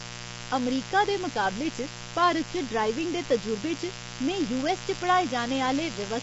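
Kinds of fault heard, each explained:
Mains buzz: There's a steady, raspy buzz under the whole clip, built on 60 Hz and its harmonics, sitting only around 10 dB below the speech, so it's hard to ignore. That rasp comes from sharp current spikes, twice per mains cycle, from something like a dimmer or rectifier, or from a poorly shielded line, spraying harmonics well up into the kilohertz range rather than leaving a smooth low hum.
Low-delay AAC compression: The speech sounds rough and grainy throughout, with a noisy fill between the voice harmonics and nothing at all above about 7.8 kHz. That points to low-delay AAC of the kind video calls use, likely AAC-ELD at a fairly low rate, around 24 kbps. Its very short frames can't separate the pitch harmonics cleanly, and at that rate the damage is plainly audible.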